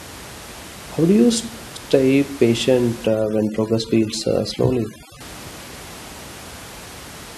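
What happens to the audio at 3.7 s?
At 3.7 s the clip is in a stretch of overdone noise removal, running from about 3.07 to 5.21 s, just after "stay patient". A noise reduction stage is working too hard here. Frequency bands close to its noise estimate get pushed far down or cut out. The quieter parts of the speech are lost along with the noise. The background drops and breaks up into twinkling specks.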